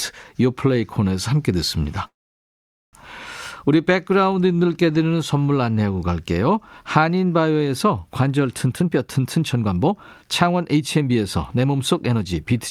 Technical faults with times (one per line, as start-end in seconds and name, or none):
2.07-2.96 call audio freeze
4.32 DC step
8.67-12.53 jitter buffer speed-up